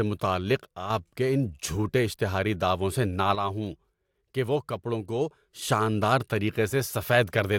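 From 0.64 to 0.90 s, just before "کے ان جھوٹے اشتہاری", and again from 3.35 to 5.62 s, after "جھوٹے اشتہاری دعووں سے", the speech drops abruptly by about 6 dB with unchanged tone, unlike a gradual fade, likely one channel dropping out before the mono sum.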